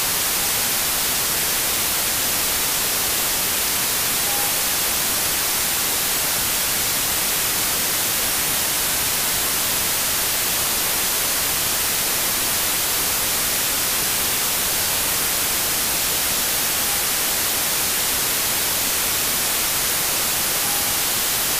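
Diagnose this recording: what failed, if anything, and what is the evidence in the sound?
Loud, harsh noise runs through the whole recording, with the original sound buried underneath, playing slow and low at about 0.75 times its proper speed and pitch. This is a wrong sample width fault at the sample-format conversion stage. The data were written as 32-bit integers but read as packed 24-bit integers, so many reconstructed values combine bytes from neighbouring samples, and only some retain the signal's top bits.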